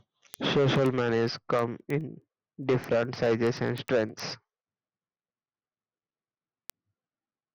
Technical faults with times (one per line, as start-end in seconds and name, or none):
0.13-7.53 word clock ticks